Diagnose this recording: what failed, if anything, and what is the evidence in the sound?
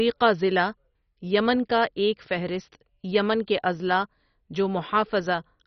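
Codec stage, likely MP2 compression: dull, gurgling speech throughout; a spectrogram shows a hard ceiling at 6.1 kHz and flickering sub-bands, fitting a 32 kbps bitrate.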